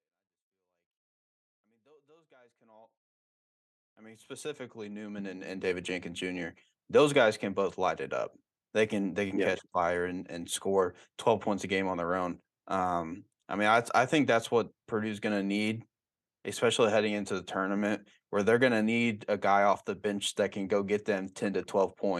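Nothing's amiss with this speech recording: it simply eases in with a gentle, editor-style fade from the very beginning that reaches full level at about 5.8 s.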